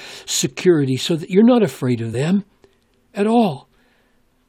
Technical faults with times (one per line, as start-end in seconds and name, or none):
2.12 compressed frames skipped